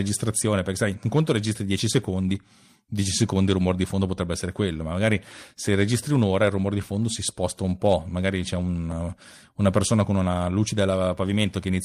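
No technical faults occur anywhere in the speech, so there is nothing to describe in time order.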